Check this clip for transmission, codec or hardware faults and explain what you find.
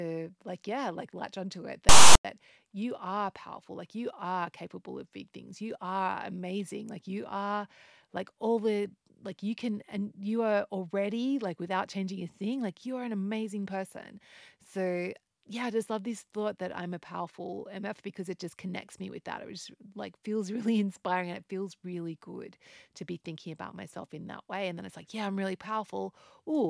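One fault stands out, early in the speech. From 1.89 to 2.25 s a harsh, buzzing rasp cuts in with hard edges, lopsided as if shoved to one side of zero, then drops to dead silence before the speech resumes. This is file tags played as audio: a block of metadata text, followed by zero padding, was decoded as though it were sound. The character bytes become that offset rasp, and the padding becomes silence.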